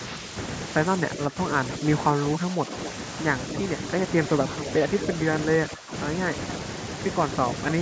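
At 1.31 to 1.36 s the speech dips briefly by a small amount. This is speech suppressed in double talk. It likely happens because both sides talk at once. The echo canceller cannot tell its own talker from the loudspeaker echo, so it turns everything down.

At 2.34 to 2.38 s a faint, delayed copy of the voice appears. This is echo leak. The far end likely plays the call on a loudspeaker. Its echo canceller misses part of what its microphone picks up, and that part comes back. The copy trails by about 260 ms. It sits well below the speech.

From 2.37 to 2.73 s the speech dips again by a small amount. This is more double-talk suppression.

Echo scraps return at 2.85 to 2.91 s, 4.57 to 4.71 s and 5.01 to 5.15 s. The delay stays near 260 ms. The last scrap is louder than the others, about 10 dB under the speech.

From 5.70 to 5.93 s the suppression is strongest. The speech drops sharply, by about 15 dB, and sounds pushed back while the other side talks.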